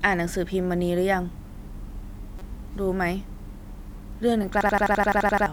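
At 2.39 to 2.42 s and again at 4.43 to 4.49 s, a corrupt frame decoded produces a brief chirp, squeak, blip or burst of noise. Flipped bits in the damaged frames put energy at wrong frequencies.

From 4.61 to 5.46 s, a system hang loop repeats one 85 ms slice ten times, a stutter at 11.7 Hz. That fits a 4096-sample buffer and replaces about a second of speech.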